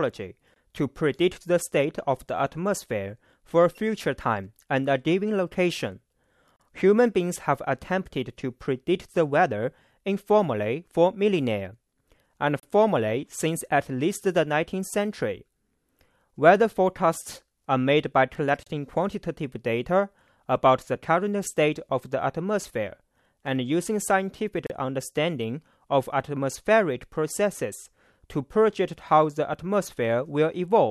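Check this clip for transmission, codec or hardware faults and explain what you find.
A gap at a join of encoded pieces recurs every 6.0 s: a 20 ms silence at 0.54 s, then 34 ms gaps at 6.56–6.60, 12.60–12.63, 18.63–18.67 and 24.67–24.70 s. Each separately encoded piece keeps its encoder's leading delay and padded final frame, so short silences with smeared edges cut into continuous speech. Unlike random packet dropouts, these gaps come on a strict 6 s grid, and the speech resumes exactly where it stopped.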